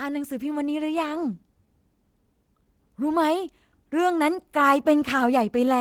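Clock drift between sender and receiver runs through the whole speech clip: the sender's clock runs roughly 2% slow, so the receiver's jitter buffer keeps draining. On a spectrogram, syllable spacing stretches slightly, with occasional duplicated slivers.

Repeated timing corrections follow from 0.04 s to 5.67 s: the receiver repeats short pieces to stay in step, pacing playback at about 97% speed and adding something like 150 ms overall. They sound like faint stutters or uneven tempo, and appear as small repeated waveform segments at irregular intervals.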